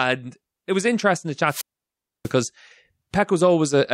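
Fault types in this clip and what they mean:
Wireless microphone squelch dropout: The radio link fades and the receiver's squelch mutes it. Between 1.45 and 2.33 s, a hiss rise precedes a 640 ms silent gap.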